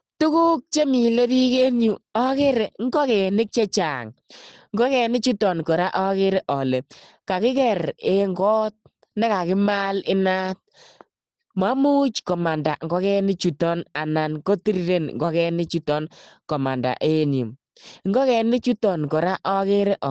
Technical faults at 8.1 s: Opus voice compression

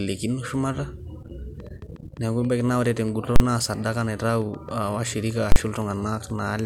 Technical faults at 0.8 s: none

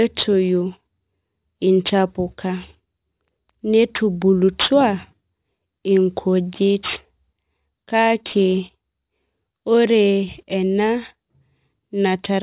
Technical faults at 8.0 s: aliasing

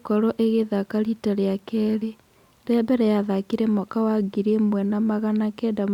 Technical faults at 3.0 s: none

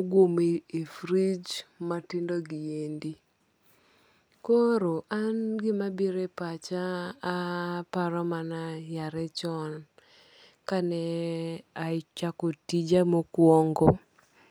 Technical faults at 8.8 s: none

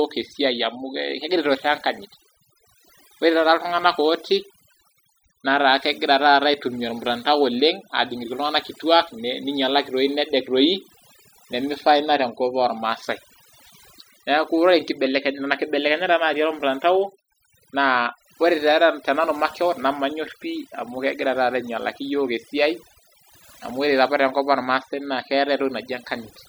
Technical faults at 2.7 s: overdone noise removal

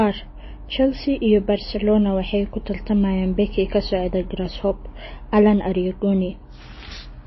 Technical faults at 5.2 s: MP3 compression

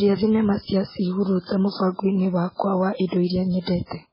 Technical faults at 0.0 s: MP3 compression

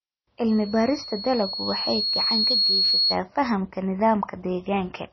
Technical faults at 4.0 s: MP3 compression

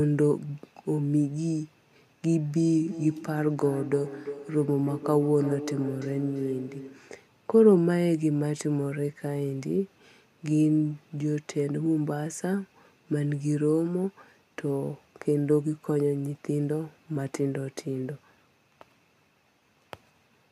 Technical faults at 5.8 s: feedback echo between two devices

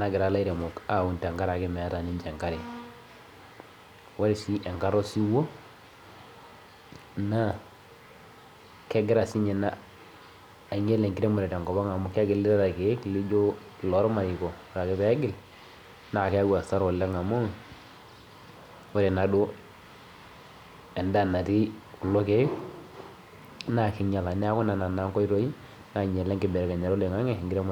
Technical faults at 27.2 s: none

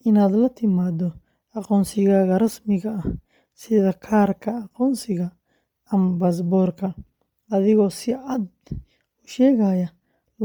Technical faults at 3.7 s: Bluetooth LC3 compression

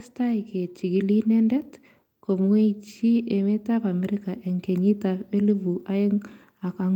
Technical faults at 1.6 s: none

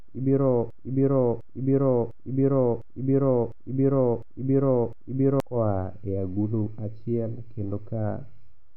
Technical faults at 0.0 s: none

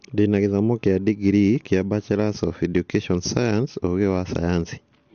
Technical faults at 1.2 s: AAC compression

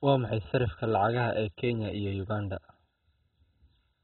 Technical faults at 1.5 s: MP2 compression

